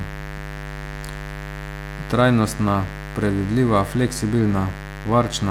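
A steady, raspy buzz runs under the speech from start to finish, sitting only a little below it. This is mains buzz: sharp switching spikes from the 50 Hz supply leak in twice per cycle, spreading harmonics up into the kilohertz range.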